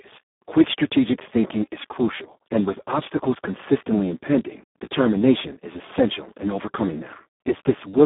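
Speex codec damage runs through the whole clip: the speech sounds hoarse, noisy and close to robotic, which points to a very low setting around 4 kbps. A spectrogram shows energy confined to roughly 200 Hz–3.5 kHz, with nothing above 3.8 kHz.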